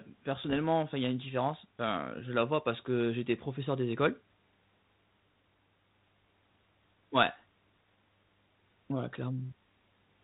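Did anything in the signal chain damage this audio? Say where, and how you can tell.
Yes. Between 0.42 and 0.61 s there are pops and short rough bursts with brief level jumps, the sign of bit errors on an ADPCM link at a low error rate, below one percent. Each flipped bit throws the decoder's step size and predictor off, so the damage rings on briefly. The 32 kbit/s G.726 coding itself is working normally.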